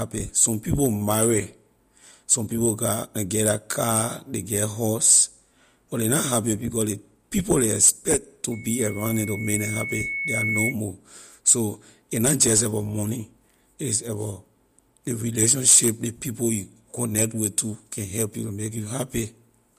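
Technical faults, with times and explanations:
8.51 to 10.75 s: loudspeaker feedback squeal. A single 2.2 kHz tone swells over about two seconds to roughly the level of the speech. The microphone is picking up its own loudspeaker. At that frequency the loop gain exceeds one, so the tone feeds itself.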